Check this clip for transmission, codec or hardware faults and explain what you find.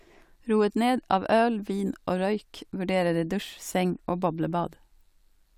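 I hear no fault anywhere in this speech recording. There is nothing to flag at any point in it.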